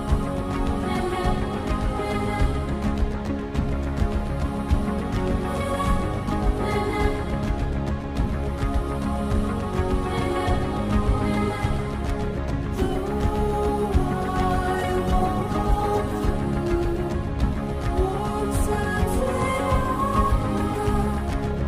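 From 14.74 s to 16.41 s a call bitrate drop sets in. The encoder was forced onto far fewer bits, which fits a fall from around 128 kbps to about 15 kbps, held at its lowest for roughly 1.6 s. The sound turns rough and watery, with the top end dulled, then clears. Unlike packet loss, there are no gaps, stutters or repeated fragments.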